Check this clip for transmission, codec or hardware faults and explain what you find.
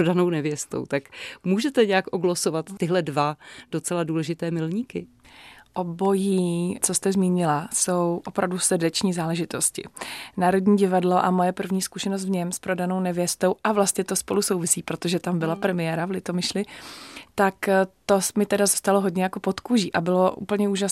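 Listening closely to the speech, nothing stood out as a transmission, codec or hardware problem.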